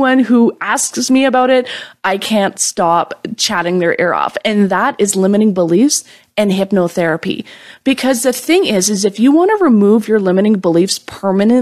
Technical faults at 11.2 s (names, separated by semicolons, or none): none